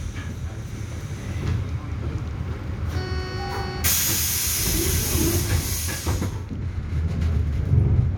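No technical faults can be heard.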